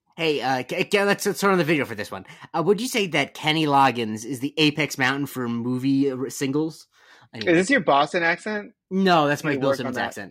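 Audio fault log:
No fault is heard in this speech clip.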